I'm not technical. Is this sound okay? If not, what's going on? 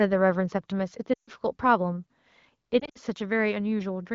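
No. Lost AMR speech frames occur from 1.13 to 1.30 s and from 2.79 to 2.98 s. Radio errors spoiled chunks of the phone signal, so the decoder stretched the last good sound while fading it. The speech quickly drops to near silence in the first spot, then cuts out in several short bursts in the second.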